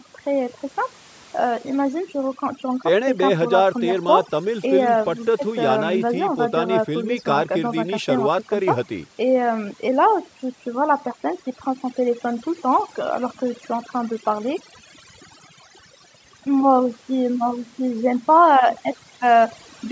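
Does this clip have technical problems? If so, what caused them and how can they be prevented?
Yes. Overdone noise removal runs through the whole clip. The suppressor was set too strong, so it cuts or mutes individual frequency bands near its noise estimate. Quiet parts of the speech vanish with them. The background drops and breaks up into twinkling specks. To prevent it, lower the reduction strength and record in a quieter space. The call microphone processing can be heard as a band limit at 8 kHz, as expected.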